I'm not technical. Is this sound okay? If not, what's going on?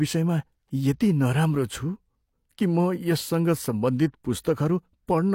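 No. At about 4.42 to 4.45 seconds there is pre-echo. A short hiss arrives just before a sharp sound in the speech. The compression spread its noise across a short stretch, about 31 milliseconds, so that noise leaks ahead and softens the sharp start.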